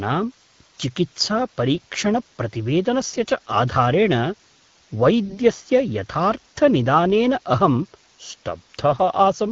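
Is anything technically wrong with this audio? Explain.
Yes. There are two faults.

Low bit depth with dither runs through the whole clip. The speech sits on what sounds like an 8-bit grid. Dither turns the rounding error into a steady, even hiss about 30 dB below the speech, with no distortion. On a spectrogram it appears as a flat noise floor across all frequencies that persists through the pauses.

AMR bit errors occur at 3.07 to 3.19 s, just before "च आधारेण", and again at 5.26 to 5.38 s. Flipped bits misplace the excitation pulses and skew the pitch, gain and spectral values. For those moments the voice turns hoarse and gargly while keeping its level. On a spectrogram the harmonics there look smeared and broken.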